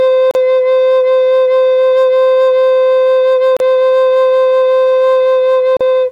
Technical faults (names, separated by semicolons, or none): gap at a join of encoded pieces